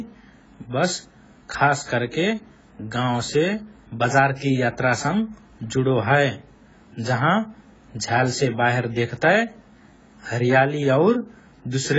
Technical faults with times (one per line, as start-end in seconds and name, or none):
0.00-11.98 AAC compression